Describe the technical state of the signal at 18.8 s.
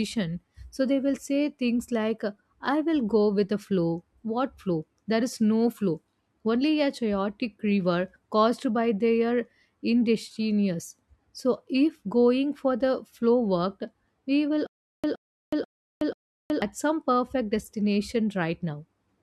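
At 18.8 s the signal is intact, with no audible fault at that moment.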